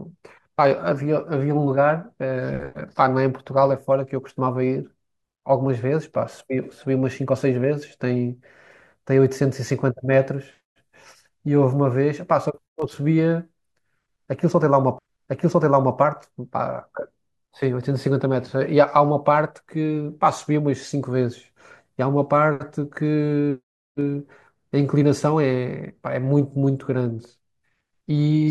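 A speech recording in which, at about 14.98 s, there is a small blip and the audio jumps back, so roughly one second of speech plays a second time before it continues at 15.98 s. This is a stream segment repeated: the player fetched or queued the same chunk twice, adding about 1.00 s.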